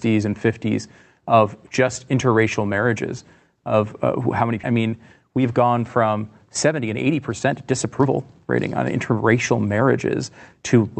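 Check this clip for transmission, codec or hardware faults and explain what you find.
Two transmission faults are audible in this speech clip: one skip ahead and a run of jitter buffer speed-ups. Both come from the transmission path, not from the codec, whose top end stops near 8 kHz.

Skip ahead, at 4.63 to 4.74 s: about a second of speech is gone. That stretch was dropped, either on the way or by the buffer when it overflowed, while later audio was already waiting. The two sides of the cut are joined almost directly, so the speech jumps forward without a pause.

Jitter buffer speed-up, at 5.28 to 5.72 s (108%), 6.67 to 8.40 s (114%) and 8.96 to 9.88 s (108%): the buffer was holding more than its target. It trimmed short pitch-period pieces repeatedly, removing roughly 40 ms, 300 ms and 70 ms. The speech runs faster at unchanged pitch and sounds hurried, most of all in the middle stretch.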